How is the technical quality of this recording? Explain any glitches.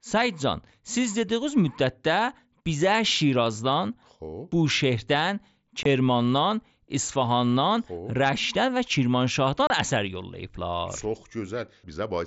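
The recording has two brief dropouts of the kind heard in unconcealed Bluetooth headset packet loss, carried over an mSBC wideband link whose light graininess on louder passages can be heard throughout.

At 5.83 s the sound cuts out for about 22.5 ms, and at 9.67 s for about 30 ms. The link between headset and phone dropped blocks of a few milliseconds each, which fits three and then four lost packets. Nothing filled the gaps, so they come through as true holes with hard edges that can click. Concealed loss would instead smear or repeat the surrounding sound, and a codec artefact would blur the audio rather than silence it.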